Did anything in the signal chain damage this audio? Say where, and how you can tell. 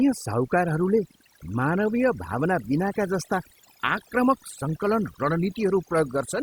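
Yes, overdone noise removal at the call-processing stage, present throughout. The suppressor cuts any band near its noise estimate, so the background drops and breaks up into twinkling specks. On a spectrogram, gaps appear speckled with isolated bins.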